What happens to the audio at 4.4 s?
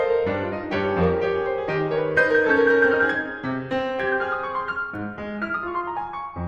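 Nothing goes wrong at 4.4 s: the music plays through that moment intact, with no audible fault.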